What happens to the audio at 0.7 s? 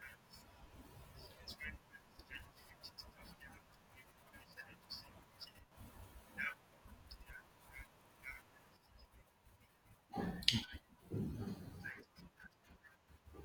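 Nothing goes wrong at 0.7 s: the speech carries on cleanly through that moment with no dropout, click, distortion or other technical fault.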